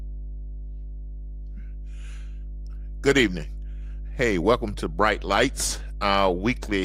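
Mains hum at 50 Hz runs throughout, likely from a ground loop or nearby transformer feeding power-line current into the signal, sitting only about 10 dB below the speech.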